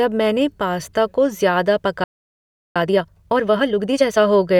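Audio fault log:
2.04–2.76 s playback stall: speech cuts out mid-flow for about 0.72 s of silence, likely the player running dry of data or its thread being blocked.
2.76–4.18 s time-compressed catch-up: speech resumes hurried at 1.5x speed but normal pitch, as small cross-faded cuts shorten the backlog.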